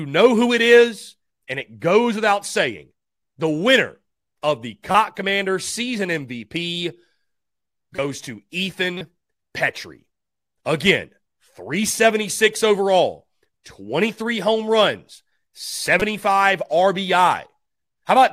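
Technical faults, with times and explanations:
4.91–4.95 s, 7.93–7.99 s, 8.98–9.01 s and 16.00–16.02 s, corrupt frame decoded: short chirpy blips right after "winner of the", just before and after "goes to", then once more. Damaged compressed frames got decoded anyway, spraying energy at wrong frequencies. The first is the loudest.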